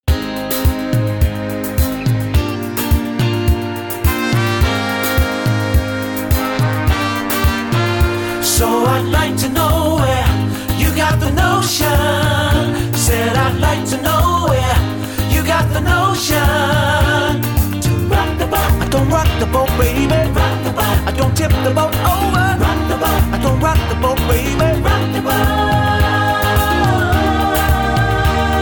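No technical faults are audible anywhere in the audio.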